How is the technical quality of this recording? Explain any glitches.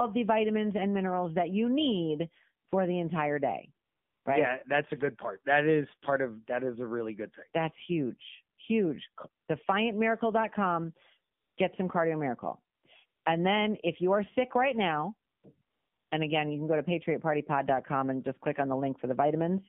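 The technical quality is poor. The whole recording carries plainly audible mobile-codec damage, and the pauses keep dropping into synthetic noise.

AMR narrowband mobile codec damage runs throughout. The speech passes through AMR-NB at 7.4 kbps. That is a low rate, so the voice sounds buzzy and synthetic. The line band is limited to about 150 Hz to 3.5 kHz. Everything above that is gone, which makes the speech thin and muffled. The codec rebuilds the voice from a vocal-tract model and a few pulses per short block. At this bitrate, that simplification is plainly audible.

AMR comfort noise appears nine times, between 2.66 s and 16.12 s. At each point, the phone decided nobody was talking and stopped sending speech frames. The receiver then filled the gap with smooth, steady generated noise. Most gaps are short, from 20 to 240 ms. The first comes at 2.66 s, after "minerals that you need". 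A longer one comes at 3.86 to 4.26 s, and another comes at 13.06 to 13.26 s, after "some cardio miracle". The longest runs from 15.62 to 16.12 s, between "are sick right now" and "and again you can". Each time, the real background switches out and flat noise switches in.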